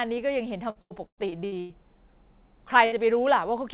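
From 0.70 to 1.72 s, repeated packet loss (robotic sound) chops the speech into a stutter. Eight gaps, the longest 110 ms, are patched by repeating earlier sound, covering about 45% of the stretch. A spectrogram shows repeated smeared, copied blocks.

At 2.86 to 2.94 s, a burst of packet loss leaves a 60 ms hole filled with the preceding sound, fading out. The waveform shows a repeated, decaying cycle before speech resumes further on.

Throughout, the call path's band stops at 4 kHz, which fits a G.711 mu-law codec.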